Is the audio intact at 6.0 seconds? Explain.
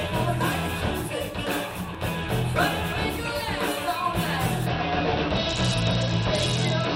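No. A Bluetooth SBC bit pool drop runs from 4.66 s to the end at 6.96 s. The encoder's sharply reduced bit budget, which fits a fall to around 72 kbps, starves the top sub-bands and coarsely quantises the rest, so the treble sounds dulled with gritty noise. A spectrogram shows the upper bands thinned or emptied, with grainy speckle below.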